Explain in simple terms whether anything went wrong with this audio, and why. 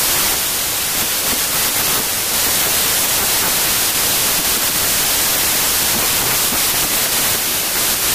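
Something's off from start to finish: a wrong sample width. The speech is buried under loud, harsh noise and runs about 1.33 times too fast and high, which points to 3-byte samples being read back as 4-byte ones, scrambling most values.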